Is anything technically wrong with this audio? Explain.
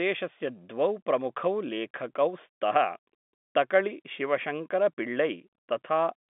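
No, nothing is technically wrong with this audio.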